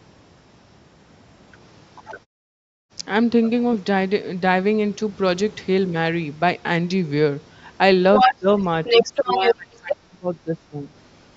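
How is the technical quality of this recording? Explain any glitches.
The recording is marred by two echo-related faults from a speakerphone-style call.

Other side's voice leaking through, at 1.95–2.2 s, 2.64–2.89 s, 3.43–3.5 s, 8.15–8.35 s, 8.85–9.54 s and 9.89–9.96 s: the echo canceller likely failed to cancel the far end picked up from the loudspeaker, so a second voice bleeds in. It is faint early on, well below the talker, but near 8 to 9.5 s it becomes roughly as loud as the talker.

Speech suppressed in double talk, at 8.24–8.47 s and 8.93–10.91 s: with both sides talking at once, the canceller likely could not tell the talker from the echo and turned everything down. The talker dips by about 15 dB briefly, then by as much as about 25 dB in broken stretches.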